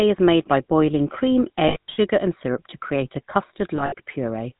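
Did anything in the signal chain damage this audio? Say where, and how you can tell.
Yes. GSM full-rate codec damage runs through the whole speech clip: a buzzy, gravelly roughness and nothing above 4 kHz, consistent with the 13 kbps vocoder's coarse pulse excitation.

Lost GSM frames at 1.68–1.97 s and 3.76–3.94 s: the network dropped frames, and the decoder held the last good ones, fading them, so the sound briefly turns to a metallic ring.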